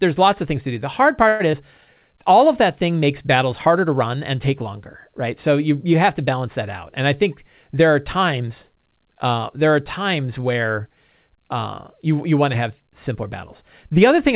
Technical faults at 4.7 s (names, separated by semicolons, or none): none